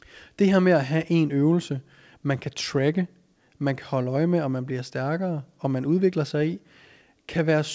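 No technical faults can be heard in this speech recording. It has passed through a WebRTC call path, and its content stops at about 8 kHz, which fits the G.722 codec.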